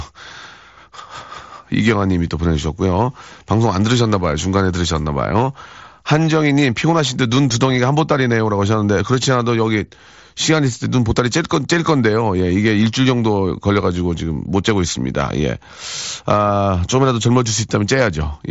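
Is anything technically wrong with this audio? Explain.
No, this is speech carried over a Bluetooth mSBC headset link working as intended, with the band ending near 7.7 kHz as that wideband codec path is expected to do.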